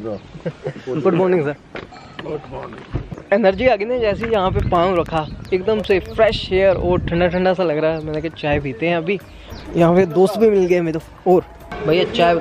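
From 4.21 to 6.30 s there's a train of clicks, around fifteen of them at about 5.8 per second, spaced unevenly and peaking roughly as loud as the sound itself. It's a ticking, popping layer, most likely from nearby interference or a faulty connection or power supply.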